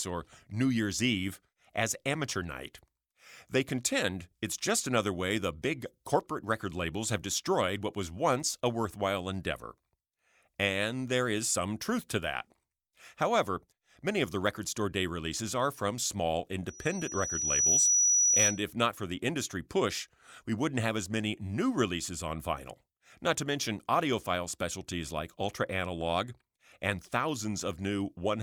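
Speech with loudspeaker feedback squeal from 16.67 to 18.63 s: a 5.9 kHz tone swells over about a second to roughly 10 dB above the speech, unlike a steady interference whistle.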